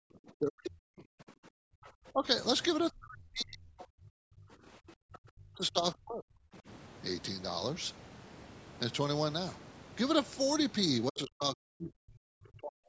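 A speech recording in which the talker's voice repeatedly sinks and breaks up: from the start to 2.26 s, from 2.91 to 6.68 s, from 11.08 to 11.94 s, and from 12.12 s to the end, stretches of the voice dip by as much as about 40 dB or drop out in fragments. This is speech suppressed in double talk, likely from an echo canceller that, with both sides talking at once, could not tell the local voice from loudspeaker echo and attenuated both. Inside two of those stretches a second, fainter voice briefly surfaces, at 3.79 to 3.85 s about 20 dB below the talker and at 11.81 to 11.90 s only about 10 dB below, as short scraps. That is the other side's voice leaking through, likely far-end audio from the device's loudspeaker that the canceller failed to strip from the microphone signal. The call's microphone chain leaves nothing above 8 kHz.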